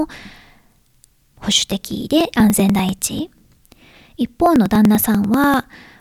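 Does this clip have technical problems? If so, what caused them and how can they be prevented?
Yes. Periodic USB or driver dropouts run from 0.15 s to 5.93 s, every 0.098 s. Each time, about 2 ms of speech is skipped outright. A recurring background task stalls the audio path, leaving a regular ticking under the speech. Prevent it by stopping the interfering background task or moving the interface to a dedicated USB port.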